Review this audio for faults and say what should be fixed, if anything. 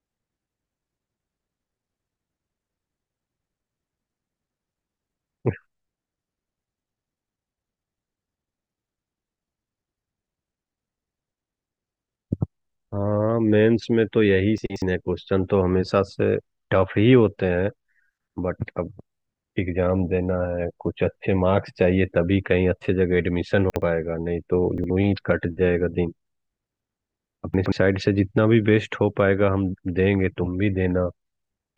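Chunks out of order at 4.68–4.8, 14.58–14.82, 23.7–23.82, 24.78–24.9 and 27.54–27.72 s: 60 ms segments play late, garbling the speech, with broken formant tracks on a spectrogram. Fix the reassembly so buffered 60 ms chunks are sequenced by index before playback or writing.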